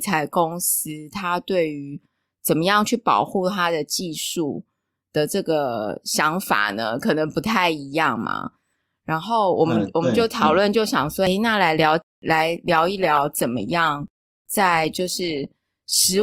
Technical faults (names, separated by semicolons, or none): adaptive stream at a lower bitrate